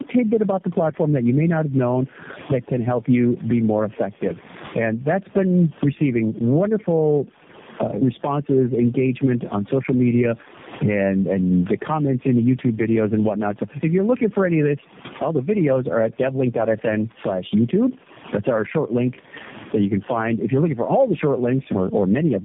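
Gain pumping runs through the whole speech clip, with the level swinging by around 20 dB. Loud and quiet passages sit unnaturally close together, giving a squashed, breathing quality. The likely cause is input gain set far too high for the microphone, with a fast limiter or compressor clamping down on each peak and releasing in the gaps.

Tandem speech coding is also present for the full length. The speech is rough, muffled and warbly, more so than one narrowband codec would leave it. Nothing remains above 3.7 kHz. The texture points to about three low-rate speech coders in series, such as G.729A and AMR-NB at different rates, joined by A-law links. Each stage re-encodes the previous coder's artefacts, so the damage accumulates.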